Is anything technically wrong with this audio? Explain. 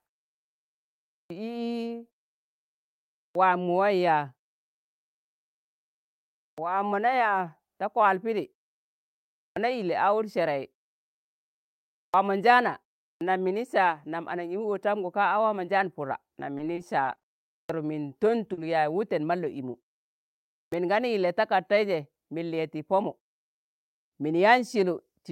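Yes. Three faults are audible in this speech clip.

Clipped start after a pause happens eight times: at 1.26, 3.31, 6.53, 9.52, 12.09, 13.17, 17.65 and 20.68 s. Each time, the speech resumes after a silence of between 0.4 and 2.2 s, and the first 40 to 48 ms of the sound is missing. The output path has dropped into an idle state during the silence and needs a moment to come back, so every onset begins abruptly, already mid-sound. This is different from muted pauses, which fade the background out and bring it back in time without losing any speech. Here the beginning of the sound itself is gone.

Repeated packet loss (robotic sound) runs from 16.57 to 17.25 s. Five separate holes fall within that stretch, none longer than 20 ms, adding up to 100 ms, or roughly 15% of the span. The receiver papers over each hole by extending the last sound, but the next hole arrives before the audio has settled. 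The result is a choppy texture with pieces missing, spread over the whole passage. A clipped start, by contrast, is a single clean cut at an onset.

Short concealed packet loss occurs once, from 18.53 to 18.59 s, with 40 ms of audio missing. Because it is a single isolated hole, the concealment carries the preceding sound across the gap and then blends back into the real signal. It is heard as a brief smear or wobble in the middle of the speech, not as the sustained roughness of the earlier stretch, and it is not tied to a restart after silence.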